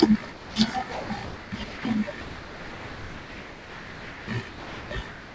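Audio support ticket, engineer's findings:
Speech replaced by steady comfort noise at 0.32–0.56, 0.92–1.10, 1.25–1.52, 1.64–1.85, 2.21–4.28, 4.49–4.91 and 5.09 s to end. Longest gap about 2.1 s. Likely sound dropped by the voice detector. Sender treated speech as background and stopped sending. Receiver filled the gaps with noise.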